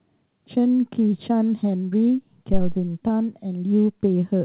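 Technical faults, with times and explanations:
1.90–1.94 s and 3.08–3.11 s, short concealed packet loss: about 20 ms went missing each time. The decoder extended the preceding sound, leaving a brief smear or wobble.
2.53–2.79 s, phantom power thump: a supply was switched on or off on a live input. The voltage step passed through the coupling capacitors as a deep thump decaying over about 58 ms.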